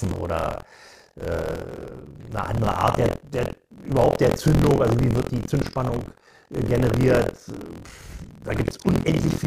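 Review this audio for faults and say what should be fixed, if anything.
Buffer tearing runs through the whole clip: a steady robotic rattle at 43.1 Hz rides on the speech and vanishes in pauses. The writer and the hardware reader of the ring buffer have drifted so they cross every period, splicing roughly a fifth of each buffer with audio about 70 ms stale, which fits a 1024-sample buffer. A waveform shows hard steps every 23 ms; a spectrogram shows evenly spaced vertical seams and buzz harmonics only under speech. Prevent it by keeping the write pointer a safe margin ahead of the read pointer, with proper period synchronisation or a larger buffer.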